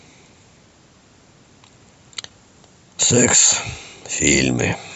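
Speech, with no audible faults.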